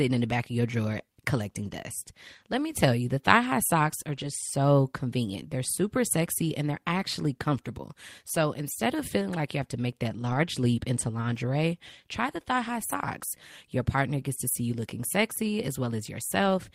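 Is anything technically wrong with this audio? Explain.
Yes. Six short stretches of this speech show lost packets rebuilt from error correction. After a packet went missing, the next one carried a low-bitrate copy of it, which the decoder played in its place. There is no gap, but these passages sound rougher and noisier. Each lasts about 20 ms at 0.93 s (after "the back of your", before "collecting dust") and at 12.91 s. Each lasts about 40 ms at 4.17 s (after "thigh high socks are", before "so convenient"), at 6.97 s and at 14.71 s (after "gets to see you"). The longest, about 160 ms at 10.09 s, points to eight separate packets being lost.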